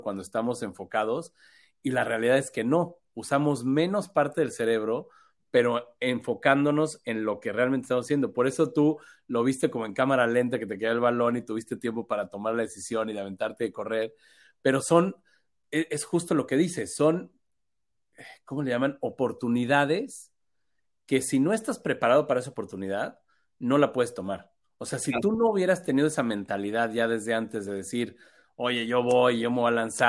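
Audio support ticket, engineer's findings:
Listened through the whole speech recording and there's nothing to flag here, so no findings to log on this ticket.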